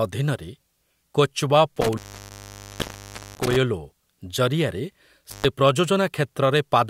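Intermittent contact breaks up this speech clip twice, from 1.76 to 3.56 s and again from 5.30 to 5.45 s. A loose cable or plug briefly loses its connection, so the signal drops out with crackle at each edge and faint hiss remains while the line is open. The first break leaves the circuit open for about 1.38 s; the second is a short 0.13 s gap.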